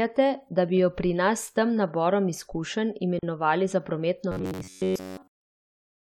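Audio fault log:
3.19 to 3.23 s, gap at a join of encoded pieces: right after "s tem naborom izkušenj" the speech drops out for about 39 ms with smeared edges, then carries on where it left off. Two separately encoded pieces were butted together, leaving the encoder's start delay and end padding in as silence.
4.32 to 6.02 s, robotic sound from repeated short buffers: the voice goes rigid and metallic, with a steady buzz at about 94 Hz that loosely follows the speech to the end. This is likely a player repeating its last chunk of roughly 10.7 ms while fresh audio arrives too slowly, so most of that stretch is repeats.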